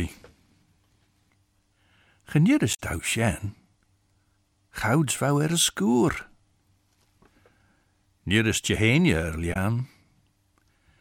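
At 2.73 s, lasting about 70 ms just before "tau sin", and again at 9.52 s for about 40 ms, damaged data in a compressed stream makes the decoder misread corrupt frames and hunt for the next header. The result is a brief glitch in the speech.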